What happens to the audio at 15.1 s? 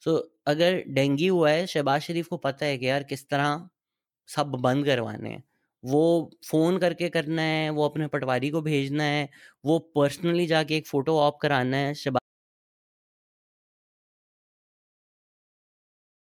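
At 15.1 s you're sitting in dead silence. The speech cuts off just after "फोटो ऑप कराना है" at about 12.19 s, and from there to the end of the clip it's pure silence, with no room tone or hiss at all. That's an audio dropout to silence, most likely a lost input, from a disconnected device, a failed link or a stray mute, while the recorder kept writing empty samples. Whatever came after that point is simply gone.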